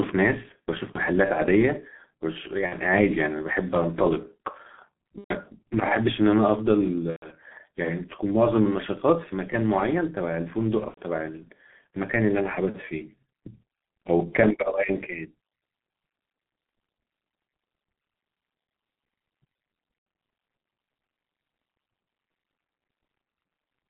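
Throughout, the speech passes through the G.723.1 codec at about 6.3 kbit/s, with the line band limited to roughly 150 Hz to 3.4 kHz. The codec damage is heavy. Nothing above the top of that band survives, so the voice sounds muffled. The codec models the voice in coarse 30 ms steps and updates that model slowly. This leaves a hoarse quality, and consonants come out blurred.

VoIP packet loss concealed by the speech codec occurs six times. The gaps fall at 0.92 to 0.99 s, 2.66 to 2.74 s, 5.18 to 5.34 s, 7.10 to 7.30 s, 10.88 to 11.00 s and 19.97 to 20.06 s. In each gap the decoder has no new data. It repeats its last pitch and filter and lowers the gain frame by frame. The sound stretches into a fading buzz or coloured noise. The shortest gap fits one lost 30 ms frame. The two longest fit about four frames, so their tails fade furthest. Each frame builds on the previous one, so the voice stays weak or distorted for a moment after each gap.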